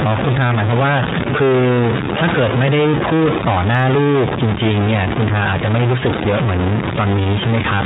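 From start to end, the sample values appear to have one data bit pinned at a fixed level, likely from a broken data line or a faulty converter. That stuck bit forces roughly half the samples off by its weight, in a pattern that follows the waveform, so the speech carries added distortion throughout. Because the bit also flips with the sign of small values, the pauses fill with a steady noise rather than falling quiet.

Across the whole clip the speech has also passed through the iLBC codec, a narrowband VoIP coder. It encodes each frame's excitation on its own, and the sound points to 30 ms frames at about 13.3 kbps. Nothing above 3.8 kHz survives, so the speech sounds muffled and telephone-like, and the coding damage is plainly audible as a rough, slightly synthetic texture layered on top of the distortion.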